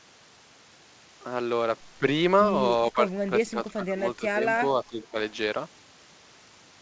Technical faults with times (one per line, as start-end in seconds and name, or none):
2.93-4.44 speech suppressed in double talk
4.82-5.16 speech suppressed in double talk